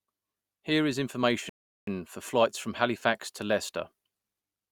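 At 1.49 s the speech just stops dead and sits in silence until 1.87 s, then picks up exactly where it left off. That's a rebuffering stall: the player ran through everything it had downloaded and had to wait for more data before carrying on. Nothing gets skipped or garbled. You just get an extra 0.38 s of dead air wedged into the speech, which sounds like an awkward, unnatural pause.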